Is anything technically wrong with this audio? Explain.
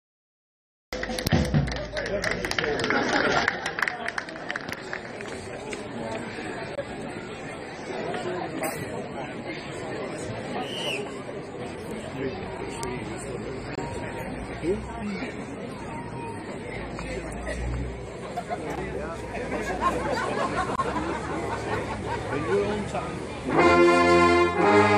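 Yes, there is one fault. A cut-off start: the clip is silent until 0.93 s, then the sound begins abruptly mid-event with no natural attack or fade. Capture or streaming began late, so the opening of the sound was never recorded.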